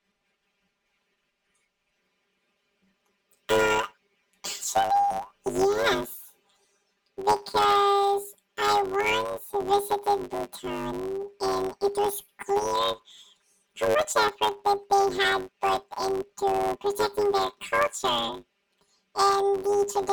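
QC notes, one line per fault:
throughout: planar audio read as interleaved. Each 10 ms block replays twice at double speed, giving a robotic 100 Hz buzz, with spectrogram stripes every 10 ms.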